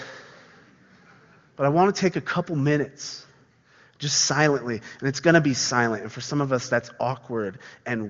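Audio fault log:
No faults heard; the speech arrives as HD Voice.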